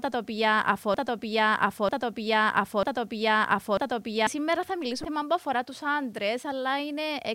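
A speech recording, grainy and gritty throughout. The roughness follows the voice, thickening on quiet syllables and tails rather than sitting underneath as a steady hiss, with the error floor only around 40 dB below the signal. That points to low bit depth without dither, likely a requantisation to about 9 bits by plain rounding. With so few steps and no dither, the rounding error is tied to the waveform and turns into distortion that changes with the sound. Right after "τα οποία", from 0.94 s to 4.27 s, the same fragment of just under a second, 0.94 s long, plays four times back to back with no variation. This is a broken-record loop, likely a stall in the player, encoder or stream that kept re-sending the last chunk it held while the audio meant for those seconds never arrived. Between 5.02 and 5.05 s, just before "που αφορά τους", a brief glitch cuts across the speech. That is damaged data in a compressed stream: corrupted bytes caused the decoder to misread the frames there and lose sync before it locked onto the next valid frame header.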